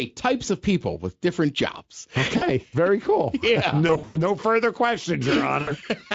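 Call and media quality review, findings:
VoIP packet loss concealed by the speech codec, 2.37–2.44 s, between "people with different jobs" and "very cool": about 40 ms missing, decoder stretches last pitch and filter into brief buzz. 3.87–4.18 s: about 200 ms lost over 280 ms, longest gap 100 ms; speech smears into fading coloured tone, stays weak after packets return. 5.61–5.75 s: about 60 ms, short buzzy fade. Component: Speex decoder concealment; codec itself shows only light coding roughness.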